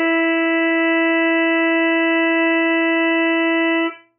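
Throughout, heavy MP3 compression, likely around 8 kbps, strips everything above 3.1 kHz and discards weak detail, leaving the music dull, muffled and swirly.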